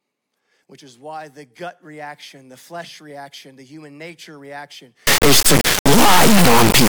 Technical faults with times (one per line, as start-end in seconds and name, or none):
5.07-6.93 integer read as float